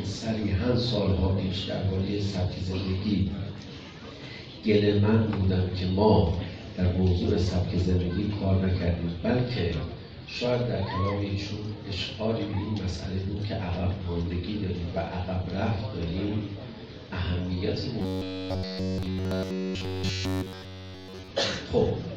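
From 18.01 to 21.31 s, new audio likely stopped arriving in time, so playback kept re-looping a short buffer of about 10.7 ms for the whole stretch. This robotic sound from repeated short buffers gives a rigid, metallic buzz locked at 93.8 Hz.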